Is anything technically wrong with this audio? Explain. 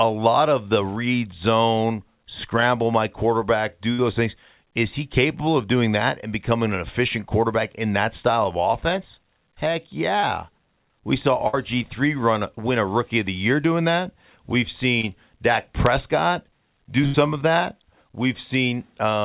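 Yes. The speech has five packet-loss events, heard over a phone-band call path with nothing above 4 kHz, which fits G.711 A-law.

A burst of packet loss occurs at 3.93–3.99 s, 11.48–11.54 s and 17.06–17.15 s. Consecutive packets were lost or arrived too late, so the receiver stretched and faded the last sound for about 50, 50 and 80 ms, heard as a held buzz or fading hiss before the speech resumes with that stretch missing.

Short concealed packet loss occurs at 10.20–10.24 s and 15.01–15.04 s. A few hundredths of a second never reached the decoder, so the receiver extrapolated the preceding sound and blended back, producing a brief smear or wobble.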